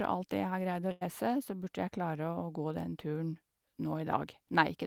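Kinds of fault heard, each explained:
Burst of packet loss: around 0.91 to 1.03 s, about 100 ms drops out; the receiver stretches and fades the last sound, then the speech jumps ahead.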